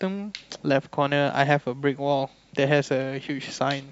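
Nothing in this recording stood out as a problem on listening.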